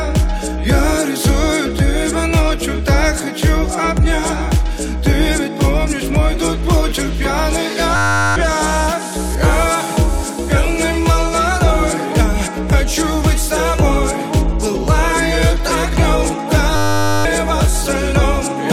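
At 7.96 to 8.36 s and again at 16.76 to 17.25 s, a system hang loop replays one 10 ms slice of the buffer, giving a steady 100 Hz buzz rather than a stutter, and nearly half a second of audio is lost each time.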